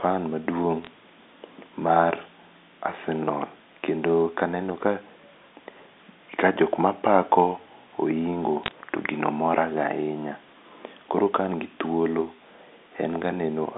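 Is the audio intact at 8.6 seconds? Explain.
No. From 8.64 to 8.71 s there are bit errors on a digital phone line: flipped bits in the G.711 stream each corrupt a single sample, and hits on high-order bits, or on the sign of a loud sample, throw that sample far off. At a rate of roughly 0.3 percent, this sounds like a brief crackle of sharp ticks over the unchanged speech. On a waveform the ticks show as isolated one-sample spikes, and on a spectrogram as thin vertical lines across the whole band.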